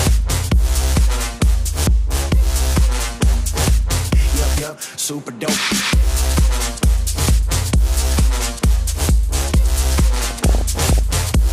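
From 10.16 to 10.99 s, near the end of the audio, the sound breaks up with the DAB burbling of weak reception. Bit errors slip past error correction into the MP2 data, so corrupted samples put short noise blips in single sub-bands and corrupted scale factors make individual sub-bands jump in level, frame after frame.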